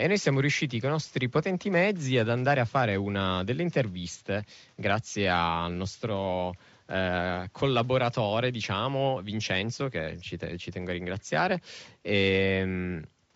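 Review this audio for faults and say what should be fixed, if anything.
Nothing to fix; no faults found in this audio.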